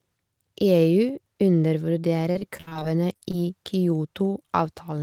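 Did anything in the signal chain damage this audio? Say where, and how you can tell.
Yes. From 2.31 to 3.35 s the speech turns choppy and robotic, with short holes and smeared stretches one after another. This is repeated packet loss (robotic sound), a network-stage fault. Ten gaps fall within that second, the longest 59 ms. The receiver patched them by extending the last sound it had, which covers 275 ms, about 27% of the stretch. Because each patch is followed almost immediately by the next, the continuity collapses into choppy, robotic sound with pieces missing.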